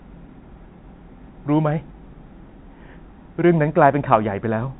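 No technical faults can be heard in this speech. The G.711 telephone coding path is working as intended, holding the sound to the telephone band with nothing above about 3.9 kHz.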